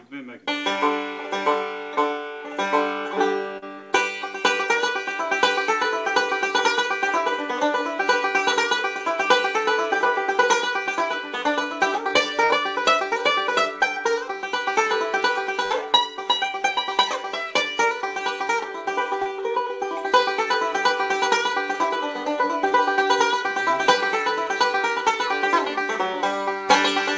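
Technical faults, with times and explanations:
3.58–3.64 s, 19.22–19.27 s and 22.69–22.73 s, short concealed packet loss: Three small holes of about 40, 40 and 20 ms where the audio didn't arrive in time. The receiver papered over each one by extending whatever was sounding, as a continued pitch if it was tonal or shaped noise if not, then crossfaded back into the real signal. You hear a quick smear or wobble.
12.44–12.51 s and 15.65–15.72 s, burst of packet loss: Two longer dropouts, about 60 ms missing in the first and 40 ms in the second, with roughly 55 and 47 ms of fill. Here the receiver kept stretching the last sound and turned it down as the gap went on, so you get a held buzz or a fading hiss before the audio picks up again. That bit in between is gone. The top end stops around 8 kHz, which fits a wideband call codec such as G.722.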